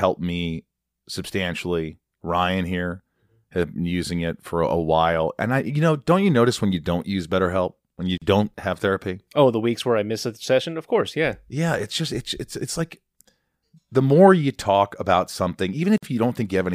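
Gaps at joins of encoded pieces break this speech at 8.18 s (about 41 ms) and 15.98 s (about 50 ms): separately encoded segments were spliced untrimmed, leaving encoder delay and padding as silence.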